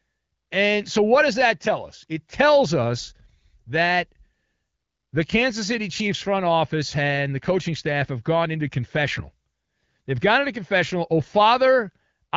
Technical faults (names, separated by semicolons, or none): none